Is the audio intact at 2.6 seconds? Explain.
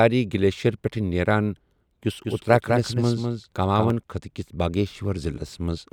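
No. A doubled audio track runs from 2.24 to 3.90 s, ending just before "خٕطہٕ کِس". The speech is likely being picked up a second time through a slower path, so a full-band copy trails the original by roughly a fifth of a second at about 5 dB lower. At 2.6 s each syllable is followed by a dry, uncoloured repeat with no room decay, and the copy cuts in and out abruptly at the span's edges.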